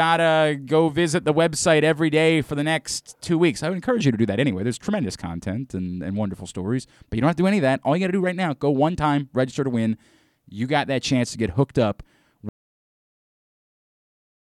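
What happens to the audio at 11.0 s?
Nothing goes wrong at 11.0 s; the speech carries on intact through that moment.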